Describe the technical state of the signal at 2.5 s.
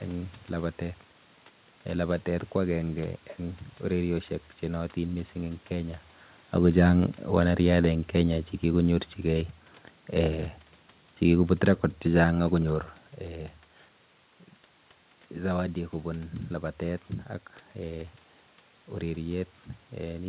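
At 2.5 s the signal is intact, with only the room's background noise and the narrowband sound of a call path that carries nothing above about 4 kHz.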